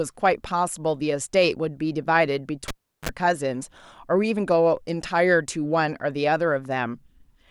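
At 2.68 s the speech is cut by a pop as a live cable is pulled and plugged in, leaving near silence for about 360 ms. During reinsertion the tip alone makes contact and a 38 ms burst of 50 Hz mains buzz breaks through, then a second pop at 3.09 s restores the signal. On a waveform, two sharp spikes frame a flat gap with a short dense band; a spectrogram shows vertical broadband lines and stacked harmonics of 50 Hz.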